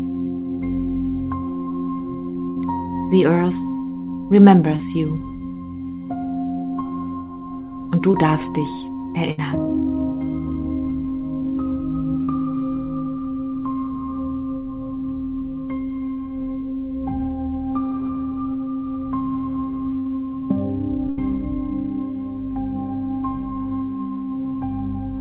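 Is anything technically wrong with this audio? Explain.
Yes. The audio has two kinds of network damage, heard through a band that stops at 4 kHz, which fits a G.711 mu-law call codec.

At 2.50–2.58 s, 9.31–9.39 s, 19.99–20.07 s and 21.09–21.19 s there is a burst of packet loss. Each time, the sound freezes into a held buzz or fading hiss, then jumps ahead. Roughly 60 to 80 ms of audio never arrived, and the receiver stretched the last sound across the gap.

At 4.76–4.81 s, 8.11–8.15 s and 12.23–12.29 s there is short concealed packet loss. Each is a brief smear or wobble where a short sound can drop out. About 20 to 40 ms went missing, and the receiver extrapolated the preceding sound before blending back into the real signal.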